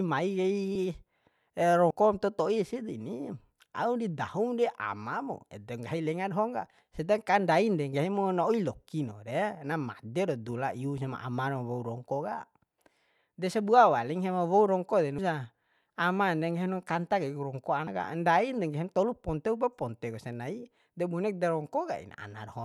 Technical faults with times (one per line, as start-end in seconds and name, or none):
0.75 compressed frames skipped
1.90 compressed frames skipped
15.18 compressed frames skipped
17.87 compressed frames skipped